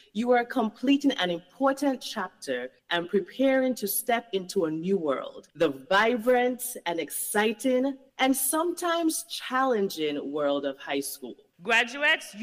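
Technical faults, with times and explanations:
No technical faults are audible.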